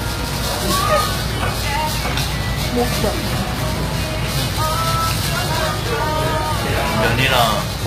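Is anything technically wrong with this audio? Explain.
Yes. Throughout, the treble sounds gritty and metallic, and nothing reaches above 14.9 kHz. This points to HE-AAC compression, likely at a bitrate near 20 kbps. The upper band is rebuilt from copied lower bands, so its harmonics do not match.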